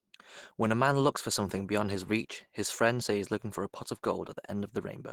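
Throughout the speech, muffled, hoarse graininess is plainly audible, likely from Opus compression in its hybrid speech mode at a low rate that fits about 16 kbps. A spectrogram shows blurred, noise-filled upper bands, with nothing above 20.4 kHz.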